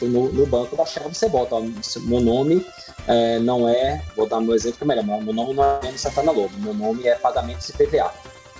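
At 5.64 s the sound turns into a buzzy, smeared continuation of itself that fades over 171 ms without ever dropping to true silence. The audio then resumes at 5.83 s with 160 ms of material simply gone. This is a long network dropout. Packets likely stopped arriving, so the receiver kept extending the last sound to cover the gap and then picked up further on without the lost part. Throughout, nothing is heard above 8 kHz, which fits the G.722 call path.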